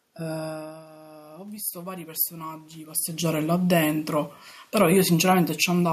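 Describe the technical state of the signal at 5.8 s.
At 5.8 s the automatic gain falling is still under way, in the span from 3.26 to 5.88 s. The control judged the input too loud or its background noise too strong and eased its gain down by about 4 dB, so speech and room noise sink together. The waveform envelope tapers gradually, and the spectrogram dims evenly across all frequencies.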